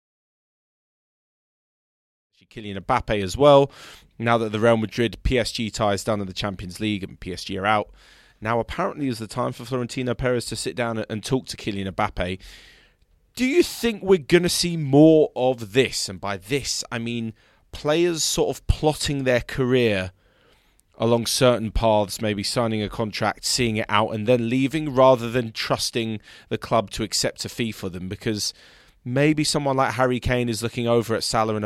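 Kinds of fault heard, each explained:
No faults are heard.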